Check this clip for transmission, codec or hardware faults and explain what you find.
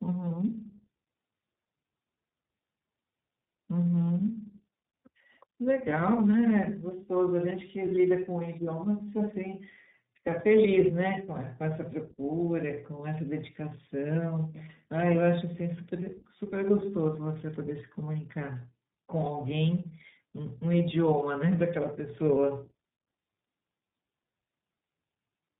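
One fault runs through the whole clip: tandem speech coding. The speech has passed through two low-rate speech codecs in a row, with a plain telephone-grade link between them. The character points to AMR narrowband followed by iLBC. Each coder was given the already damaged output of the one before, so their losses stack. Nothing is heard above about 3.8 kHz. The speech sounds muffled and rough, with a warbly, watery texture.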